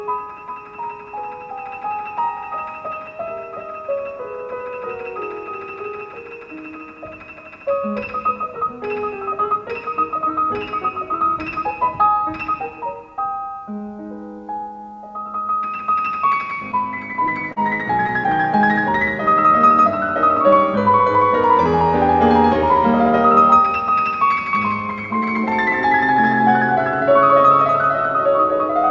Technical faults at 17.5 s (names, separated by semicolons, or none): repeated stalls (stutter)